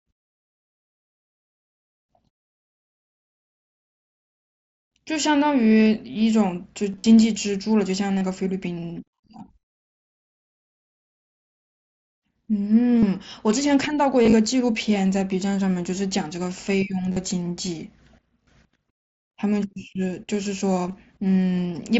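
Short buzzy, tone-like stretches held at a steady level break into the speech at 6.92, 8.18, 12.99, 14.22, 17.12, 18.44 and 20.87 s, each ending in a slight warble as the real audio returns. This is concealed Bluetooth headset packet loss. Voice packets from the headset were lost, and the receiver filled each gap by repeating the best-matching recent stretch of waveform, covering about 30 to 80 ms per event. The light graininess of the wideband mSBC link can be heard underneath.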